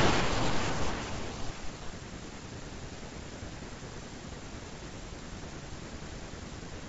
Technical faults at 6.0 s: none

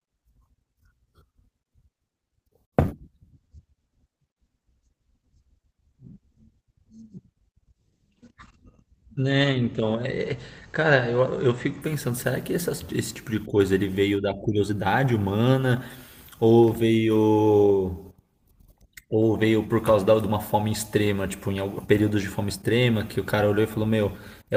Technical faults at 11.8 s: call bitrate drop

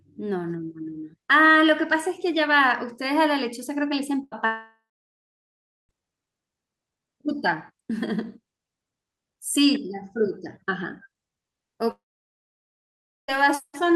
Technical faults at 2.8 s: none

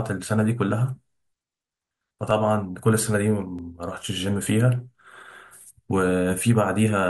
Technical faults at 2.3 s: dropped samples

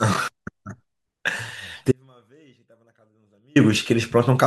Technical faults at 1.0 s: none

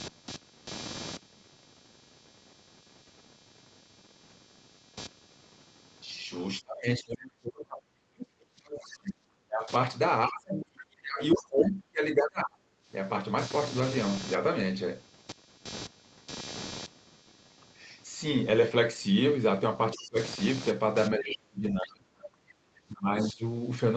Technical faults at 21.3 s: computer activity noise; speech suppressed in double talk

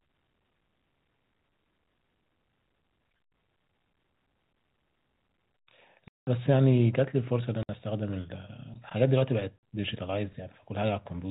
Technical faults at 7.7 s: packet loss filled with silence

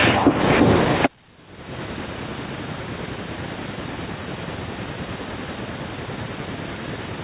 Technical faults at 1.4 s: gain pumping

